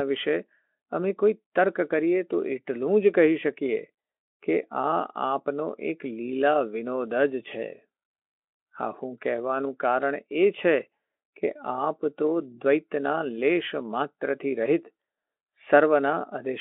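No technical faults are audible in this speech. The narrow band from about 250 Hz to 3.4 kHz and the at most faint coding texture fit a Speex link running at a fairly generous setting, around 18 kbps.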